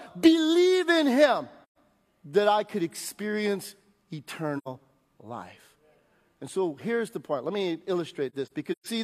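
AAC frame loss with muting at 1.64 s (about 130 ms, just before "that I could experience"), 4.57 s (about 85 ms) and 8.29 to 8.87 s (scattered gaps, the longest roughly 150 ms). The decoder zeroes the missing frames, and the overlapping windows fade the sound out and back in, leaving soft-edged holes.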